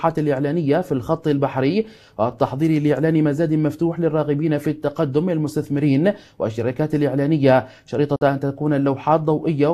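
A digital broadcast dropout occurs from 8.16 to 8.22 s. The receiver stopped getting usable data, either because the signal was lost or because incoming frames failed their checksum, so it muted its output until valid frames resumed. The sound fades out over about 3 ms and leaves a brief silent hole before returning. The gap points to roughly 48 ms of missing material, which fits two lost frames. Whatever was transmitted during that interval is gone.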